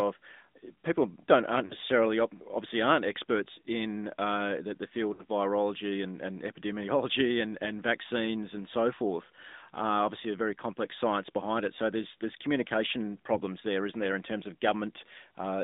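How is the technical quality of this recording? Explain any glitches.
Quality's fairly rough: it's speech squeezed through a mobile codec the whole way, plus three brief dropouts.

AMR narrowband mobile codec: everything sits in a 200 Hz to 3.7 kHz band, nothing bright above that. The vocal-tract model rebuilds the voice from a few pulses in each 5 ms, so the voice comes out plainly buzzy and synthetic, which fits a mid-rate mode somewhere around 10 kbps.

Lost AMR speech frames: at 1.66 to 1.74 s, after "people don't aren't", and at 5.14 to 5.24 s, after "in uh the the", about 40 ms goes missing each time, which points to two dropped frames. At 13.34 to 13.40 s, after "there's there's communication", it's about 20 ms, likely one frame. Radio errors corrupted those frames, so the decoder replayed the last good pitch and vocal-tract settings at falling gain. You hear a short smeared warble and dip before the voice returns a bit rough.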